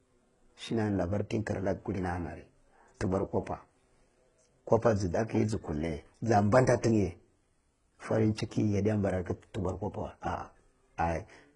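From start to finish the speech carries heavy codec damage, most likely HE-AAC compression at a very low rate, around 12 kbps. Only the lower spectrum is coded directly; the treble is rebuilt by copying lower bands upward and fitting them to a coarse envelope, so the top end sounds synthetic. Harmonics fail to align across the crossover, leaving s sounds gritty and lispy, and there is no content above 11 kHz.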